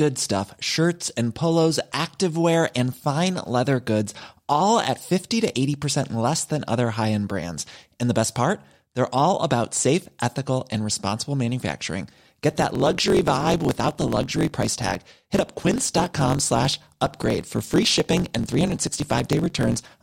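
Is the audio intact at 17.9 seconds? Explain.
No. From 12.49 s, just after "ethical and responsible manufacturing", to the end of the clip at 20.02 s, the audio has a block size mismatch (truncated). One stage writes longer blocks than the next reads, and the tail of each block is discarded, which points to 1024-sample blocks being cut short. At 17.9 s this produces a buzz at about 46 Hz, the block rate, and the speech runs 1.07 times fast with its timbre kept.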